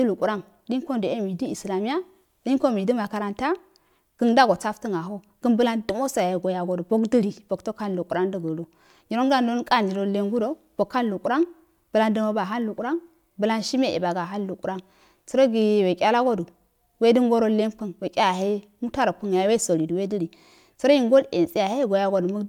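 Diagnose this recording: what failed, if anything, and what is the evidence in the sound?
No audible faults found.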